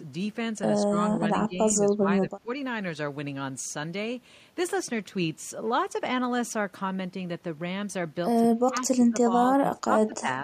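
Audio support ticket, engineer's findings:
Speech suppressed in double talk at 0.85–0.96, 1.18–1.22, 1.46–1.58, 1.74–2.07, 2.28–2.48, 8.53–9.3 and 9.7–10.28 s. Talker dips by about 5 to 20 dB, likely echo canceller ducking near-end during simultaneous far-end speech.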